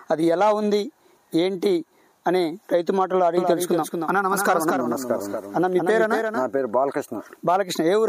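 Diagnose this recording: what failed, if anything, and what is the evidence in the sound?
From 3.37 s to 6.59 s the sound is a doubled audio track. A second full-band copy runs about a fifth of a second behind the original and roughly 5 dB quieter, and it switches on and off abruptly at those times. It is not room reverb or acoustic echo, because there is one copy with no decay tail, no repeats and no room colouring. The likely cause is a second, slower capture path or an edit holding two out-of-step copies.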